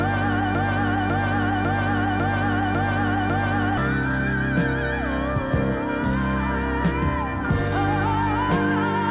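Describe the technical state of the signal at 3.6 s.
A broken-record loop runs from the very start to 3.77 s, so at 3.6 s the same 0.55 s fragment is still repeating back to back, six times in all. This is likely a stalled stream resending its last buffered piece, losing the intended audio, all band-limited below 4 kHz.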